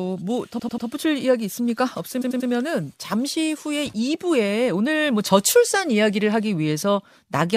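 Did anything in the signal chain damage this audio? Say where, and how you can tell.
Yes. Repeated frames, from storage or the codec stream. At 0.58–0.86 s and 2.21–2.49 s, the speech stutters. One 93 ms block plays four times, adding 0.28 s each.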